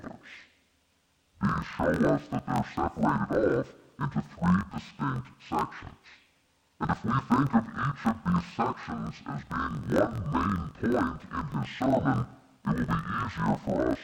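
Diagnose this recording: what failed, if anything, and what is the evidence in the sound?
Sample-format conversion broke: interleaved audio read as planar, with roughly 21 ms blocks halved, so it sounds an octave low, doubled and choppy at 47 Hz throughout.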